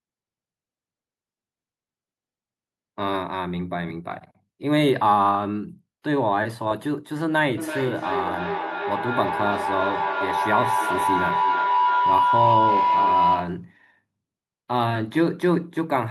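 A feedback loop between two devices sharing a call in one room feeds each pass from microphone to loudspeaker back with gain, so this speech recording develops a feedback howl from 7.57 s to 13.69 s. It narrows to a tone near 1 kHz, pulses roughly every 300 ms, and peaks about 2 dB above the speech.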